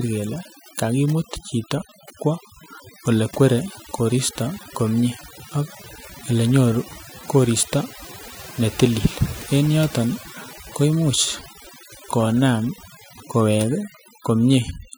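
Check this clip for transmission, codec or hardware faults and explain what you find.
One fault runs through the whole clip, and it comes from processing rather than transmission, codec or hardware: overdone noise removal. From start to finish the background falls to near silence dotted with twinkling specks. A noise reducer set too strong is cutting individual frequency bands down or out whenever they sit close to its noise estimate, and the quieter parts of the speech are removed along with the noise.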